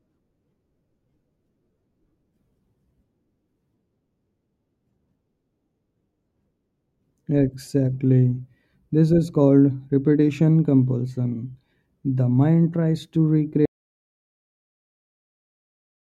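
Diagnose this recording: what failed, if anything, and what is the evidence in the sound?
An audio dropout to silence begins at 13.66 s and runs to the end of the recording at 16.12 s. The speech stops abruptly mid-flow, and the gap is silent with no room tone or hiss. A noise gate or fade would leave a release tail or a faint floor. The likely cause is lost input at the capture stage, through a disconnected device or failed link, while the recorder kept writing silence. The final 2.5 s of speech is gone.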